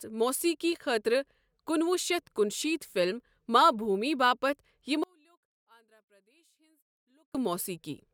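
At 5.04 s, just after "فلم ماں بھوٗمی باپتھ", the speech almost disappears when heard in mono. The level falls by about 38 dB and stays down until 7.35 s. What remains is a faint trace of the sound. The likely cause is one channel inverted. One stereo side has flipped polarity. The centred voice is the same in both channels, so summing them cancels it. Only the small difference between channels survives.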